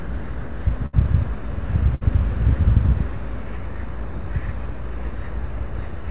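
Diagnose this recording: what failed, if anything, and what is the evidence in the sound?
At the converter or analogue input stage, a steady DC offset has shifted the whole waveform off zero for the full length of the clip. You can't hear it as a tone, but it shows up as constant energy at the very bottom of the spectrum and eats into headroom on one side of the waveform. That makes the signal clip earlier in one polarity than the other.

On the network side, two bursts of packet loss hit the call path, which is G.711 A-law at 64 kbps with nothing above 4 kHz. The first runs from 0.86 to 0.95 s and the second from 1.95 to 2.03 s. In each, the receiver's concealment stretched the last sound for about 68 ms and then 61 ms, fading it as the gap went on. When the sound resumed, about 60 ms was gone each time, which fits a short run of lost packets.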